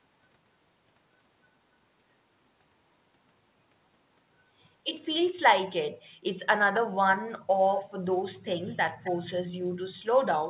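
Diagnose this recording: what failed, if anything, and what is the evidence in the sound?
Echo leak at the call-processing stage. Short delayed copies of the speech surface at 6.74 to 6.80 s and 9.04 to 9.12 s. They trail by 264 ms, about 10 dB and 15 dB below the speech. The likely cause is a loudspeaker whose echo canceller let residue through.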